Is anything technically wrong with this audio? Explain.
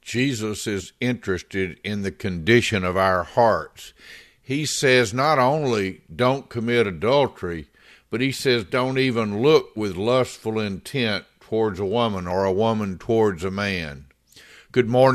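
Yes, there is damaged data in a compressed stream, at 0.79 to 0.81 s and at 12.31 s. Corrupted bytes make the decoder misread frames and lose sync, giving brief glitches in the speech. A spectrogram would show thin broadband vertical streaks, and the waveform an abrupt discontinuity.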